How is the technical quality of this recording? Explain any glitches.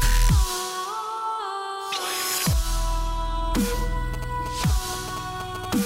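One clear fault: GSM signalling bursts from about 4.14 s to 5.66 s. A nearby 2G phone was transmitting short groups of radio bursts, the kind sent before a call or a text arrives. The audio circuitry rectified that RF, turning the 217 Hz burst envelope into audible interference. It comes through as a galloping dit-dit-dit of short 217 Hz buzzes, roughly 15 dB below the main sound.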